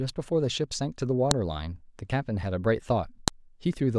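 At 1.31 s and 3.28 s, sharp clicks cut through the speech. This is a file header played as audio: leftover WAV header bytes at each join, decoded as samples.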